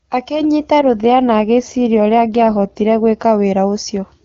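A speech clip carried over AMR wideband (HD Voice), clear at first in a way that fits its top 23.85 kbit/s mode, has an AMR rate drop from 0.81 to 3.24 s. The network switches the codec to a lower mode, one that fits about 8.85 kbit/s, spending bits on error protection, so the voice turns rougher and more synthetic. Unlike packet loss there is no gap, and unlike a narrowband fallback the frequency range stays the same.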